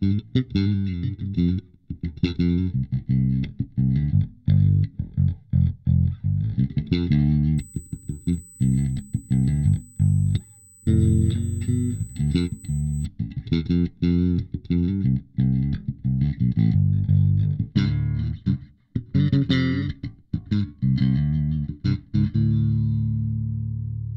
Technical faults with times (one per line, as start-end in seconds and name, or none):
7.58-13.06 USB whine